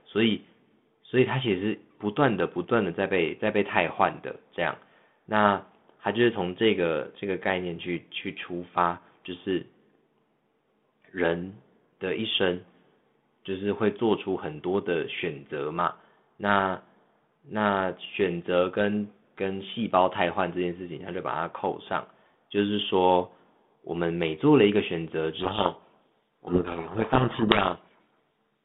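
From 25.4 s to 28.33 s there is a codec payload misread. The decoder takes the G.726 code words with their bits in the wrong order. The speech is buried in harsh distortion. Before that, the narrow telephone band fits 32 kbit/s G.726.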